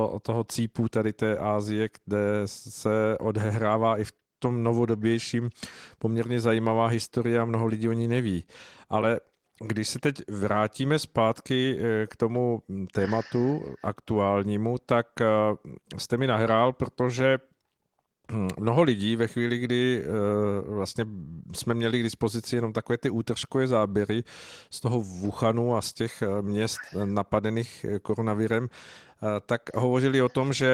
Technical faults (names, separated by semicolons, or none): none